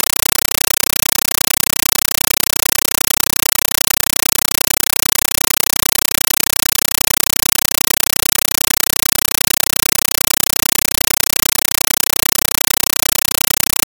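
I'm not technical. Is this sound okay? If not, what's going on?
No. Throughout, a compressed stream is played as audio: likely Dolby Digital data is treated as raw sound, producing loud static in 8 ms bursts, 31 times a second.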